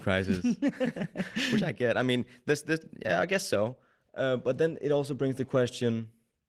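No technical faults turn up anywhere in this recording of speech, so there's nothing to point to along its timeline.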